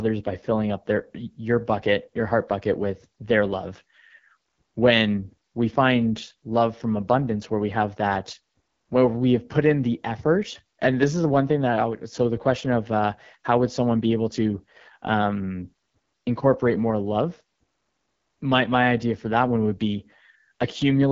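From start to end, the speech carries AMR wideband (HD Voice) codec damage, plainly audible as a rough, raspy texture. The coarseness fits one of the codec's lowest rates, around 8.85 kbit/s, where the vocal tract model runs short of bits. Nothing is present above 7.5 kHz.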